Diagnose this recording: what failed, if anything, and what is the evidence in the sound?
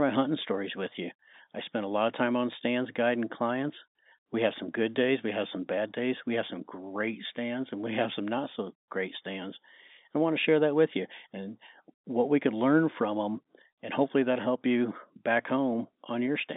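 Nothing failed; no faults found.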